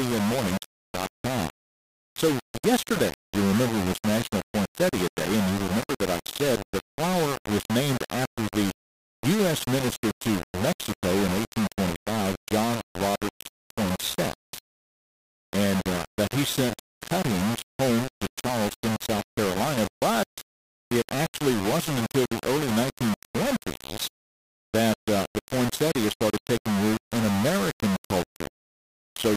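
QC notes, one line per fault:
Throughout, low bit depth without dither: the speech is thick with grainy, buzzy distortion that tracks the voice, only about 10 dB under it, and quiet tails sputter or drop out. Likely rounded to around 3 bits with no dither, so errors follow the signal.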